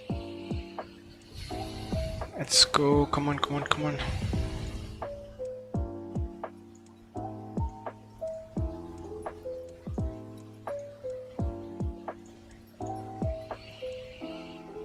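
No technical faults can be heard anywhere in the clip.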